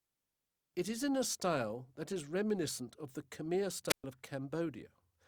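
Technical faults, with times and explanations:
3.88–4.04 s, wireless microphone squelch dropout: the speech is interrupted by a short burst of static as the radio link from the microphone weakens, followed by a gap of near silence lasting about 123 ms where the receiver's squelch circuit has shut the output off rather than pass raw noise. Once the carrier recovers above the squelch threshold, the receiver unmutes and the speech resumes, which accounts for the hiss, hole and return heard in that order.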